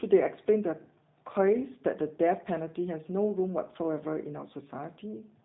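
Throughout, the speech sounds rough, synthetic and cut off above 4 kHz: plain G.729 codec damage, with speech rebuilt from a vocal-tract model at a rate consistent with 8 kbit/s.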